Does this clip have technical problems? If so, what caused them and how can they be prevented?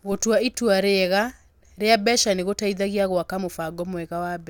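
No, this speech clip has no audible technical faults. With nothing going wrong, there is no cause to explain and nothing that needs preventing.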